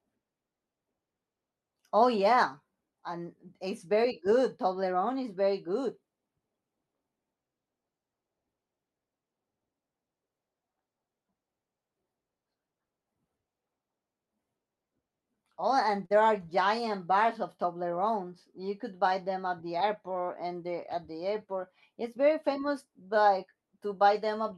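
At 16.05 to 16.12 s a short stall from a late packet occurs: a packet arrived late, the jitter buffer drained, and the receiver stretched the preceding speech for about 46 ms before resuming where it stopped. Nothing is lost, but the sound is briefly held with a slight buzz or dip, and playback runs 46 ms later afterward. The Opus call path caps content near 12 kHz.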